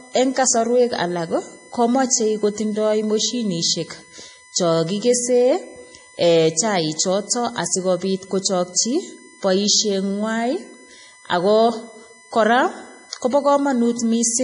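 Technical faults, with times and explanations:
Throughout, USB whine: a fixed tone at 1 kHz, strongest at its 2 kHz harmonic, sits about 25 dB under the speech, showing as steady horizontal lines on the spectrogram.
Throughout, MP3 compression: treble stops dead near 10.6 kHz with watery, swirly sibilants and smeared attacks. The spectrogram shows a hard ceiling and flickering holes. Likely a heavily starved MP3 encode, which fits about 32 kbps.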